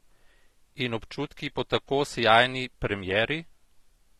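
Throughout the speech the sound is dull and smeared. Sibilants fizz and sustained vowels warble. Bands drop out and the top end is cut. This is likely AAC compression, with damage that fits AAC-LC at a low bitrate near 32 kbps.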